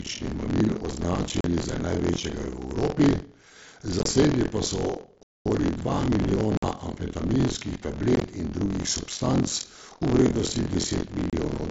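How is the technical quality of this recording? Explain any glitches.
The technical quality is poor: a steady buzz from buffer tearing runs through the whole recording, and six dropouts from Bluetooth packet loss cut into the speech.

Buffer tearing runs from start to finish. The writing and reading sides of the audio ring buffer have drifted so they cross inside every period. About a third of each buffer holds audio from around 50 ms earlier, spliced in with hard joins. This produces a robotic rattle at 43.1 Hz, which fits a 1024-sample buffer, and it is heard only while speech is present.

Unconcealed Bluetooth headset packet loss occurs at 1.41–1.45 s (37.5 ms lost), 3.99–4.06 s (37.5 ms scattered over 60 ms, longest gap 22.5 ms), 5.23–5.46 s (225 ms), 6.57–6.63 s (52.5 ms), 8.16–8.22 s (30 ms scattered over 60 ms, longest gap 15 ms) and 11.30–11.33 s (30 ms). Headset voice packets never arrived, and nothing filled them in, so the speech drops to abrupt holes. 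The long 5.23 s gap is a break of about a quarter second, and the scattered ones sound choppy. The mSBC wideband link itself adds only light graininess.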